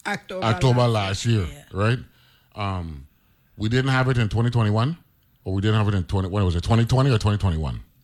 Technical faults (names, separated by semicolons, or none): none